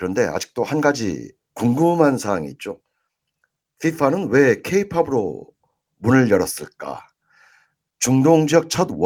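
Nothing in this recording of speech stood out as a technical problem on listening.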